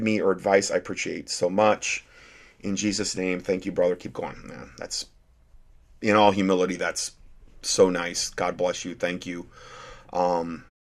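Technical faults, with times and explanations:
Nothing to flag here; the speech just eases out with a gentle fade over its last moment, done by about 10.7 s.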